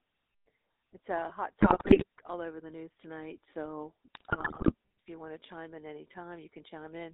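A buzzy, gravelly roughness sits on the speech from start to finish, with the band squeezed to roughly 300 Hz to 3.7 kHz. That is the GSM full-rate codec. It rebuilds the voice from a vocal-tract filter excited by sparse, regularly spaced pulses, discarding most of the fine excitation detail, which fits a 13 kbit/s codec. The damage is plainly audible, and nothing survives above the top of the line band.

From 1.60 to 2.04 s, and again from 4.14 to 4.73 s, the speech breaks into squawks, pops and gargling. These are GSM bit errors. Corrupted bits on a poor radio link reached the decoder and scrambled its filter, pitch and gain parameters, so individual frames come out with a warped spectrum or a sudden jump in level. The second burst is slightly longer and more sustained.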